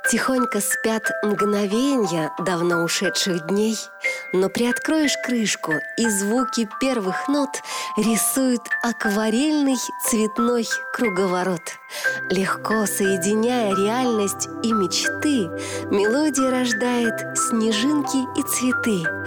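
No technical faults can be heard anywhere in this audio. There is nothing in it that calls for a timestamp or a comment on how it was captured or carried.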